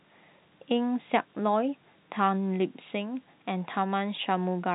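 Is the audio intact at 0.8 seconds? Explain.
Yes, at 0.8 seconds the speech is intact, with no fault there beyond the ordinary band limit of G.711 telephone coding, which passes nothing above 4 kHz.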